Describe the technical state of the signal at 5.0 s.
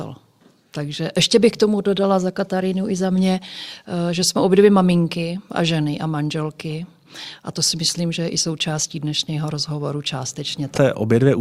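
At 5.0 s the speech signal is intact, with no audible fault at that moment.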